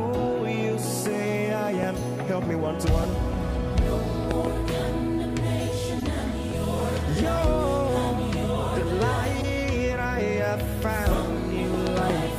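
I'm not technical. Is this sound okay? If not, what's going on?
No. Two kinds of fault are audible. There is a loud pop at 1.83 s, a quick double pop between 4.31 and 4.47 s, and another double pop between 11.87 and 12.12 s. Each jumps well above the surrounding sound, which continues underneath. The likely cause is a sudden electrical jolt, such as a plug, a switch or static.

There is also a corrupt frame decoded at 3.01 to 3.05 s, 5.99 to 6.03 s, 9.39 to 9.44 s, and 11.09 to 11.15 s. Each time, about two damaged chunks of the compressed file were played anyway, producing a brief chirp or noise blip, loudest near 6.0 s.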